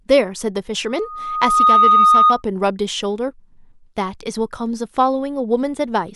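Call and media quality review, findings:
Steady tone swelling to a shrill squeal over the speech, 0.87 to 2.43 s, at 1.2 kHz, building in under a second to around 10 dB above the speech. Loudspeaker feedback squeal: microphone picking up its own loudspeaker, loop gain above unity at 1.2 kHz.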